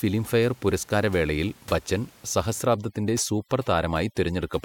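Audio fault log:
2.65–4.65 s, overdone noise removal: the room noise, about 26 dB below the speech earlier, drops and breaks up into twinkling specks. Single bands near the noise estimate are cut, unlike a gate muting everything together.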